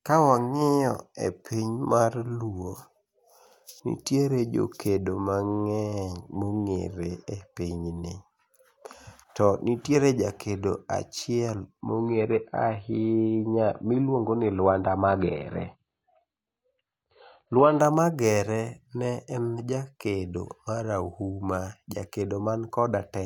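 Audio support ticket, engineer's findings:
Adaptive stream at a lower bitrate, 11.8 to 17.8 s. Sudden drop in quality, no gap: treble gone above 4.5 kHz, dull and smeared, codec artefacts up for the full 6 s, then abrupt return to full bandwidth. Probable component: player's adaptive bitrate logic switching to a low-rate rendition after a connection slowdown. Sound points to a very low AAC rate, far below the surrounding stream.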